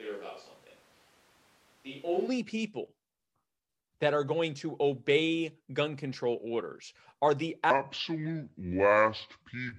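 From the very start until 2.27 s, the speech sounds roomy and hollow, with thin bass. It is about 5 dB quieter, and room noise sits roughly 30 dB below it. This is likely a switch to a distant microphone, with the close one missing.

At 7.71 s, right after "control orders are the", a section at the wrong speed begins and runs to the end at 9.78 s. It plays at 0.664 times normal speed. Pitch drops about seven semitones, so speech turns deep and slow, likely from playback at a mismatched clock.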